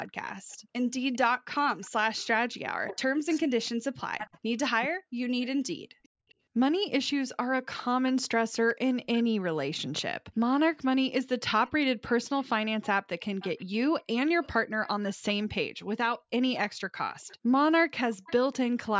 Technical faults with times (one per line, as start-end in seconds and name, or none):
0.07-3.38 echo leak
2.64-4.99 speech suppressed in double talk
5.42-6.34 echo leak
6.17-6.23 background gated by the echo canceller
7.77-9.24 echo leak
11.67-15.47 echo leak
16.55-18.57 echo leak